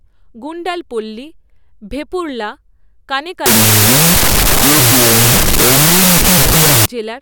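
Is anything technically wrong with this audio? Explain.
Yes. From 3.46 to 6.86 s there is a wrong sample width. It fits 32-bit float data read as 16-bit integers. Loud noise buries the speech, playing at half speed and lower pitch.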